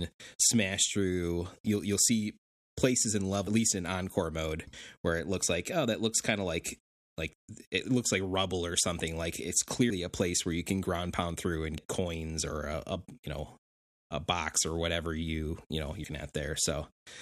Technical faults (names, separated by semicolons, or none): compressed frames skipped